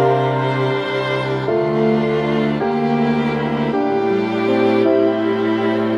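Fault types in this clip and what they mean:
No technical faults can be heard anywhere in this clip. There is nothing to list.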